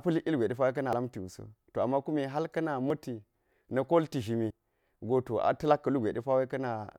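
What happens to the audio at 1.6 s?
Nothing goes wrong at 1.6 s; the speech carries straight through that moment without a dropout, click, glitch or other fault.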